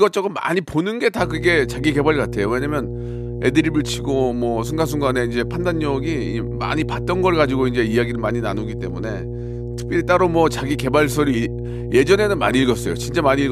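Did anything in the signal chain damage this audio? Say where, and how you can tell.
Yes. Mains hum at 60 Hz enters the analogue wiring at 1.18 s and runs to the end, strong and only slightly below the speech. A ground loop or nearby transformer couples the power line into the signal. A spectrogram shows a steady horizontal line at 60 Hz with low harmonics.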